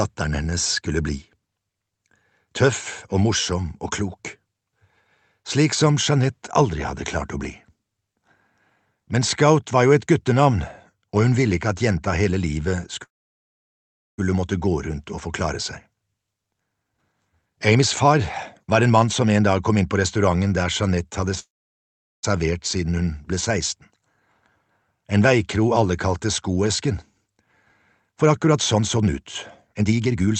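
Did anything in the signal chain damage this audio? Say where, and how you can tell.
Yes, in the network and jitter buffer stage. There are call audio freezes at 13.03 to 14.20 s and 21.39 to 22.25 s: a brief decaying tail, then near-silence for about 1.1 s and 0.8 s. The sound resumes where it left off, so the dropouts add gaps without losing any material. The likely cause is late packets draining the buffer.

Right after that, the jitter buffer speed-up kicks in as it sheds the built-up delay. It runs from 16.27 to 18.21 s at 149% and from 18.63 to 20.41 s at 110%, then from 28.08 to 29.14 s at 128% and 29.73 to 30.35 s at 162%. The pitch stays put but things sound rushed, because pitch-period chunks are being cut out. The first stretch alone drops roughly a second.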